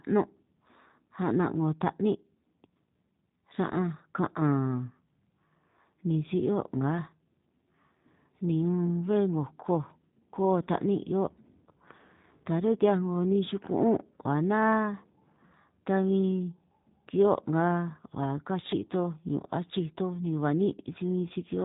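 From start to finish, the speech carries the sound of the G.729 codec. Nothing above about 3.8 kHz survives, so the top end is gone and sibilants lose their edge. The codec does not store the waveform. It rebuilds each short frame from a vocal tract filter, a pitch predictor and a few pulses. That model is crude, and the damage is plainly audible as a rough, synthetic, buzzy texture. The quality fits an 8 kbit/s stream.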